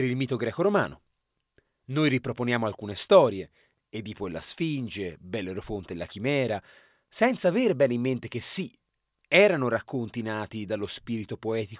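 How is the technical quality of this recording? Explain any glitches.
The recording has no technical glitches: the signal stays continuous and stable throughout, with no dropouts, clicks or level disturbances to explain.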